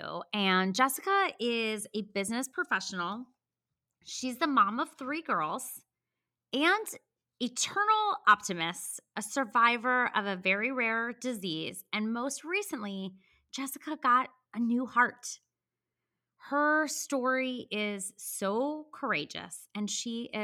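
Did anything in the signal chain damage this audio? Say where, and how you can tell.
No, nothing in the signal chain damaged this audio.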